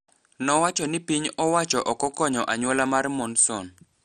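Throughout, the speech sounds dull, with nothing above 13.2 kHz, and carries a heavy gurgling, granular roughness as upper bands flicker in and out. This is likely MP2 compression at a starved rate near 56 kbps; a plain low-pass filter would dull without that grain.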